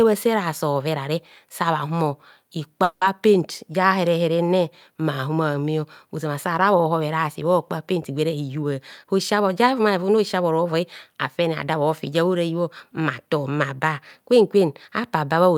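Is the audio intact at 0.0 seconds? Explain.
Yes, at 0.0 seconds the speech is intact, with no dropout, click, distortion or other audible fault.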